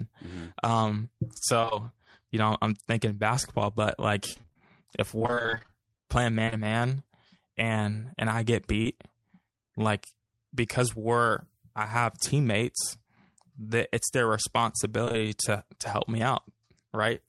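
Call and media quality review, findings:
Repeated packet loss (robotic sound) at 1.61–1.73 s, 4.33–6.54 s and 15.05–15.19 s, ending before "to to help me". Choppy speech. Longest run follows "thinking basketball but like". Concealment extends the previous audio across gaps of up to 26 ms.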